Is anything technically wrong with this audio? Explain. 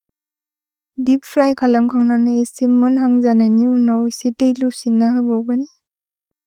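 No, nothing is technically wrong with this audio.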